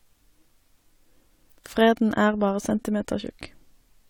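No technical faults can be heard anywhere in this recording of speech. There is no event in the audio that calls for a time or an explanation.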